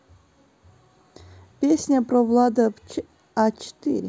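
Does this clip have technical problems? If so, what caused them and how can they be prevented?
No, no technical faults here.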